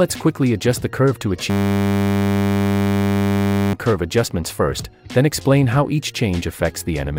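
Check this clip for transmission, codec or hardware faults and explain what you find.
One hardware fault. From 1.5 to 3.73 s the audio freezes into a steady 100 Hz buzz: a system hang loop, with a hung system replaying one 10 ms ring-buffer chunk while roughly two seconds of audio are lost.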